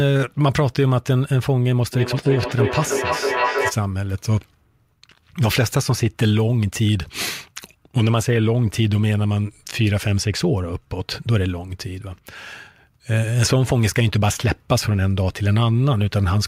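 From 1.93 to 3.84 s there is feedback echo between two devices: a second device in the room replays the call audio into a microphone whose echo canceller cannot remove it. The sound returns at intervals of roughly 300 ms, thinner and ringing, peaking at about 2 dB below the speech.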